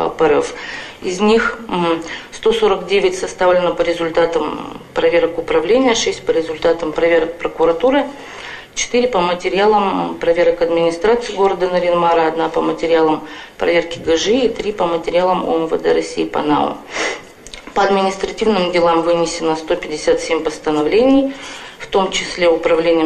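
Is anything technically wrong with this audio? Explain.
No, nothing is technically wrong with this audio.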